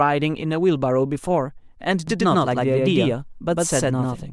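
Speech, with a doubled audio track from 2.08 s to the end. A second full-band copy sits around a tenth of a second behind, at roughly the same level. It starts abruptly and has no decay or room colour. Likely cause: a slower second capture path or a misaligned edit.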